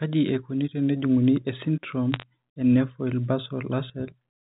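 A speech clip carried over G.711 telephone coding, band-limited below 4 kHz, with a burst of bit errors on a digital phone line between 2.14 and 2.23 s. Flipped bits in the 8-bit logarithmic samples knock single samples far from their true values. Where a sign or high-order bit is hit, the result is a sharp tick, and together they form a brief crackle at an error rate of roughly a third of a percent. On the waveform, isolated one-sample spikes jut out of the speech. On a spectrogram, thin vertical lines run up to the 4 kHz ceiling.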